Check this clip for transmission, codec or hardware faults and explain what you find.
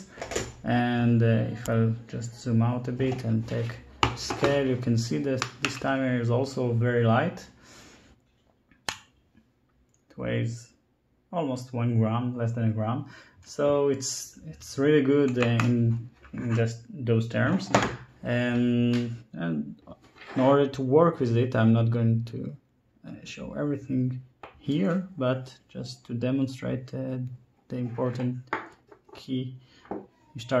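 Nothing in the audio points to a transmission, codec or hardware problem.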